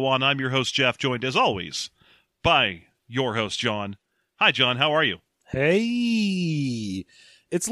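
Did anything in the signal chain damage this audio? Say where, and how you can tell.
No, nothing along the chain seems to have hurt this one; I can't hear any stage leaving its mark on the speech.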